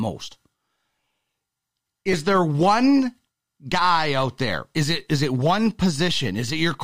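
A repeated buffer at 2.13 s in this speech clip, just before "there one guy out": the playback device received no fresh audio in time and replayed its last block twice more, three identical copies in a row with a hard join at each seam. Each piece lasts about 5 ms, which points to a very small buffer, so the repeat comes across as a brief click or buzz rather than an audible stutter, and roughly 10 ms of real audio is skipped.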